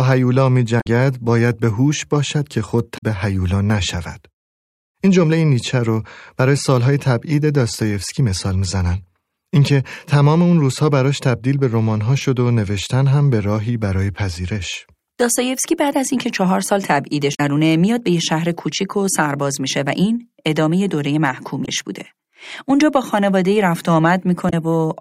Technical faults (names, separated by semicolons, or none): damaged data in a compressed stream